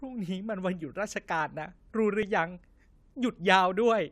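A likely clock mismatch of about 150 ppm between two devices lets a buffer drift and slip a few samples, heard as clock drift buffer slips: four regular clicks every 1.03 s from 0.38 to 3.47 s. At 2.23 s, overlapping time stamps at a 2-second segment boundary make the player cut real audio, producing a small skip.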